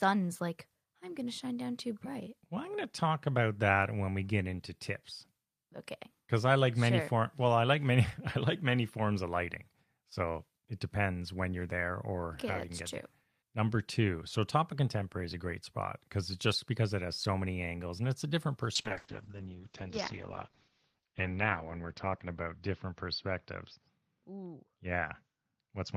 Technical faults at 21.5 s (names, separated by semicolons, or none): call bitrate drop